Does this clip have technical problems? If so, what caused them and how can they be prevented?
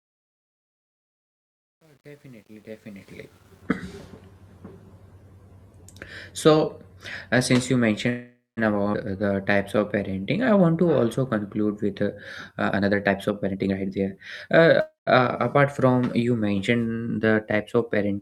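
Yes. The speech shows five kinds of fault.

Truncation distortion on a fade runs from 0 to 3.62 s, during the opening fade-in. The fade was computed with roughly 10-bit resolution and no dither, so the quietest part, worst from 0 to 2.96 s, is rendered with only a few coarse amplitude steps. That is heard as gritty instead of a clean rise from silence. Prevention: perform fades at high internal precision and apply dither before any reduction in word length.

Call audio freezes occur at 8.09 to 8.59 s and 14.80 to 15.09 s. In each, the sound stalls and is stretched into a decaying buzz or hiss that falls to silence, about 180 ms of silence in the first and 140 ms in the second. Playback then resumes where it stopped, with nothing lost. The pauses, 476 ms and 262 ms long, add that much delay, and the likely cause is late packet delivery that drained the jitter buffer. Prevention: give real-time audio network priority and allow the jitter buffer enough depth to ride out delivery stalls.

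Skip ahead occurs at 8.93 to 8.96 s. Playback jumps forward and roughly 150 ms of speech is missing, with only a few milliseconds of fill joining the two sides, so the join is abrupt. A stretch of audio was dropped, either in transit or by the jitter buffer when it overflowed, while later audio was already waiting. Prevention: reduce buffer backlog gradually with time-scaling instead of dropping whole blocks of audio.

Jitter buffer slow-down runs from 9.1 to 10.32 s. To rebuild its reserve, the receiver repeated individual pitch periods and fragments of pauses, adding 136 ms in total. Speech plays at about 90% speed with unchanged pitch, so sounds are drawn out. Prevention: stabilise packet arrival and tune the buffer's adaptation so that it refills less aggressively, keeping the stretching imperceptible.

Jitter buffer speed-up runs from 12.77 to 14.07 s. With surplus audio queued, the receiver repeatedly cut out short runs of pitch periods, removing roughly 400 ms. 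Speech plays at about 127% speed with unchanged pitch and sounds hurried and compressed. Prevention: limit bursty packet delivery and cap the buffer's compression rate so that excess delay is drained over a longer span.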